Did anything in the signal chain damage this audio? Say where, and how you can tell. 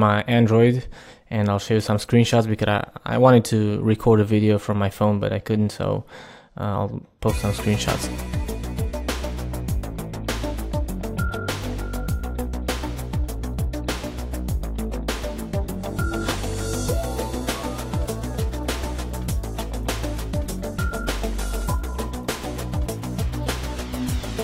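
No, nothing along the chain seems to have harmed this one, and there's nothing in what I hear that I'd trace back to any stage between the source and your ears.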